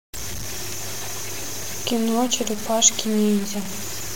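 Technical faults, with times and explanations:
Throughout, low bit depth without dither: the speech sounds gritty, with distortion following it and the quietest parts dropping out or sputtering. This is likely undithered truncation, fitting about 5 bits.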